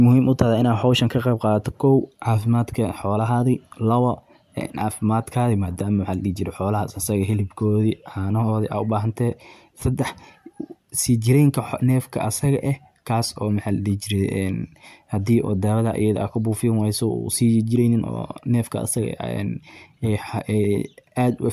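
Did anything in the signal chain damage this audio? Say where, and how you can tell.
No, nothing along the chain has left a mark on this speech that I can hear, so there's no stage to point a finger at.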